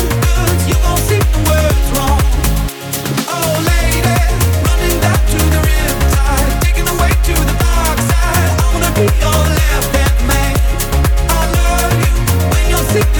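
Nothing technically wrong turns up here, so there's no fault to point to and no cause to explain.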